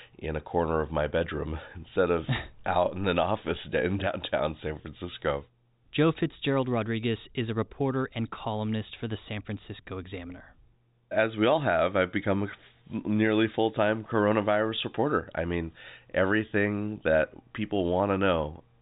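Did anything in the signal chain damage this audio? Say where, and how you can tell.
No, nothing damaged this audio.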